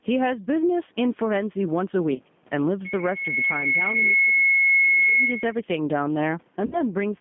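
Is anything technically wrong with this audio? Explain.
Yes. Several faults are present in this speech clip.

Throughout, the level pumps. The level ducks by around ten decibels under each loud syllable. The likely cause is gain pumping: gain set far too high, with a fast limiter pulling it back on every peak.

Also throughout, there is G.729 codec damage, and it is plainly audible. The sound is confined to about 150 Hz to 3.5 kHz. Speech sounds rough and slightly synthetic, which fits 8 kbit/s G.729A. That codec rebuilds the voice from a vocal tract filter, a pitch predictor and sparse pulses.

At 2.13 to 2.20 s and again at 6.66 to 6.77 s, there is VoIP packet loss concealed by the speech codec. The first gap lasts 30 ms and fits one lost packet. The second lasts 60 ms and fits two. The decoder extends its last pitch and filter into a sound that fades. The voice stays weak briefly afterward.

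From 2.84 to 5.55 s, a loudspeaker feedback squeal at 2.2 kHz builds over about 1.5 seconds. It ends a few decibels above the speech. The microphone is hearing its own loudspeaker, and loop gain exceeds one at that frequency.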